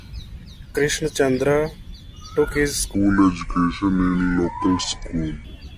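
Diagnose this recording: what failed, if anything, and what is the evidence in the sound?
A wrong sample rate fault hits playback from 2.95 to 5.44 s. The speech slows to about two-thirds speed and drops roughly seven semitones, low and dragging. Speed and pitch fall together. That fits 48 kHz audio clocked out at 32 kHz without conversion.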